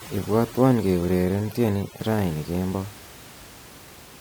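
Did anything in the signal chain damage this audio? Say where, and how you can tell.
Yes. From 0.0 to 2.0 s the call-processing stage applies overdone noise removal. The room noise, sitting about 19 dB below the speech, drops and breaks up into twinkling specks. The suppressor is gating individual frequency bands hard whenever they come close to its noise estimate, so the quieter parts of the speech spectrum are cut along with the noise, leaving isolated bands flickering on and off.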